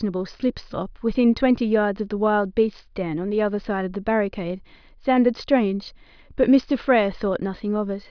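No technical faults can be heard anywhere in this speech recording.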